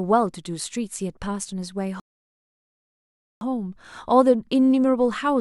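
A short speech recording with one rebuffering stall. At 2.00 s the audio drops to complete silence. It stays silent until 3.41 s. Then the speech picks up at exactly the point where it stopped. No sound is skipped or repeated. The player ran out of downloaded audio and had to wait for more data. The pause adds about 1.41 s to the playback time.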